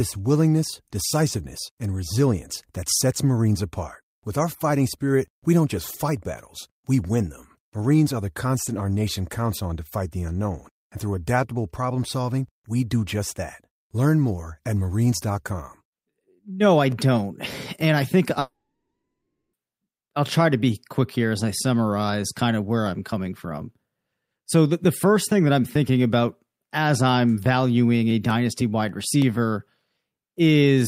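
A speech clip with a long network dropout from 18.39 to 19.55 s, after "I think". The last sound smears into a fading buzz, then briefly goes silent. "I'll try to be" resumes with speech lost. The gap is far longer than a brief packet-loss click, likely a stalled stream.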